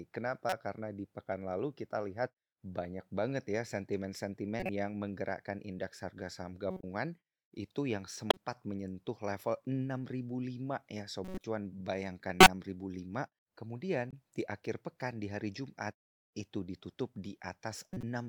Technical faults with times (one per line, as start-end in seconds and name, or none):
0.49-0.53 corrupt frame decoded
4.60-4.69 corrupt frame decoded
6.71-6.83 corrupt frame decoded
8.30-8.37 corrupt frame decoded
11.25-11.44 corrupt frame decoded
12.40-12.47 corrupt frame decoded
14.10-14.13 corrupt frame decoded
17.93-18.03 corrupt frame decoded